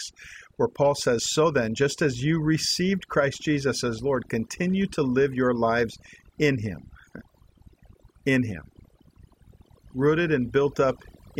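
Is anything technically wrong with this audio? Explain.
Yes. Overdone noise removal runs throughout this speech, over-suppressing bands near the noise floor, leaving near-silent gaps with twinkling specks, and a spectrogram full of scattered isolated dots.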